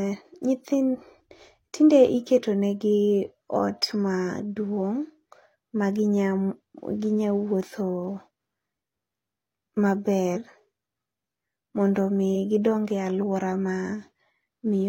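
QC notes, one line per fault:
10.31–10.37 s, compressed frames skipped. About 150 ms of speech goes missing and the audio jumps forward. That fits roughly three lost 46.4 ms frames.
12.31 s, compressed frames skipped. A shorter jump of about 100 ms, consistent with two missing frames.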